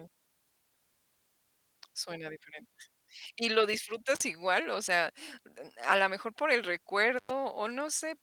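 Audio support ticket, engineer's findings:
Intermittent contact: cutouts at 4.15–4.22 s (37 ms open) and 7.18–7.31 s after "la mejor por el" (97 ms). Loose plug/cable. Crackle edges and hiss during the gap, unlike clean codec dropouts. Opus path fine.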